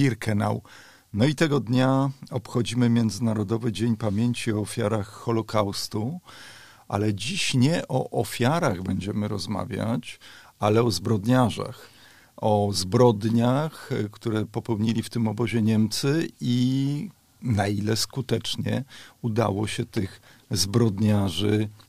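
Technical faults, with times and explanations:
Nothing technical trips up here, as far as the ear can tell, so there's nothing to list.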